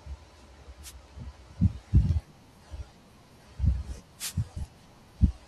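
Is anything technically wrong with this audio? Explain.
Yes. Wireless microphone noise hits occur at 0.82 to 0.93 s and 4.18 to 4.34 s. The radio link from an analogue FM transmitter faded as reflected signals cancelled, letting receiver noise surge up, heard as short swishes of static.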